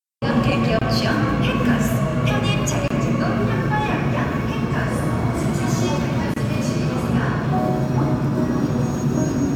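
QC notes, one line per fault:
0.79–0.82 s, 2.88–2.90 s and 6.34–6.36 s: gap at a join of encoded pieces. The audio was encoded as separate sections and spliced back together without trimming each section's encoder start-up delay and final-frame padding. At each join, a gap of about 26 ms, 25 ms and 26 ms opens in continuous sound, with edges smeared by the codec so the silent part is shorter. The sound then resumes exactly where it left off.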